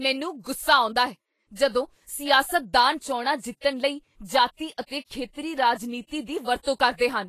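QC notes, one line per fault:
Throughout, Vorbis compression. The speech sounds hissy and grainy. Tones are roughened and attacks blurred, plainly audible. Nothing is present above 14.2 kHz. The likely cause is low-quality Vorbis coding, fitting about 30 kbps, which quantises treble detail into noise.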